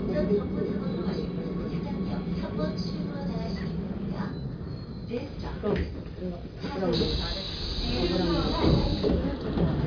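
No technical faults can be heard anywhere in the recording.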